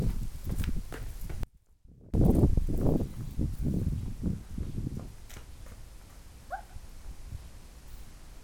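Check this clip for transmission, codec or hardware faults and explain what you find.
One fault stands out: an audio dropout to a faint residue from 1.43 to 2.14 s, lasting about 0.70 s. The signal likely cut out while the path stayed live, leaving only faint sound roughly 25 dB down. The waveform shows an abrupt collapse to a thin trace, and the spectrogram shows a sharp-edged, near-empty band.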